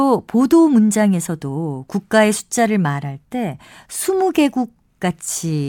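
Nothing here sounds like a technical fault; the speech just runs its course without any dropouts, glitches or other trouble catching the ear.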